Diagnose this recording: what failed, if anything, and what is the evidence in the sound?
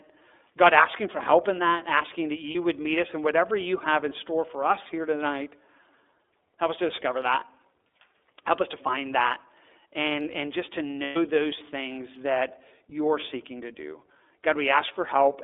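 The failure sits at the codec stage: iLBC coding across the whole clip. Nothing passes outside roughly 300 Hz to 3.6 kHz, and the speech has a plainly rough, synthetic grain. That grain separates it from simple telephone band-limiting, and fits iLBC at 13.33 kbps with 30 ms frames, each frame's excitation coded on its own.

The network stage adds lost iLBC frames. From 2.51 to 2.56 s, between "in that asking that" and "would meet us and", and from 11.03 to 11.17 s, between "and and just to" and "those things that you're", the decoder fills the gap with a held, buzzy vowel-like sound built from the last pitch cycle. The first gap fits one lost 30 ms frame, the second four. The voice is clean again almost immediately afterwards. That quick recovery, with no silence and no smeared recovery, marks frame-independent iLBC concealment rather than a plain dropout.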